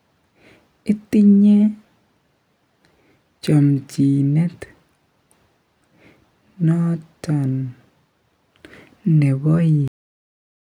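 Speech recording with a cut-off end: at 9.88 s the sound stops mid-utterance and falls straight to digital silence for the remaining 0.9 s. The final buffers were never written, so unlike a fade-out or natural ending there is no decay, and unlike a dropout, nothing resumes.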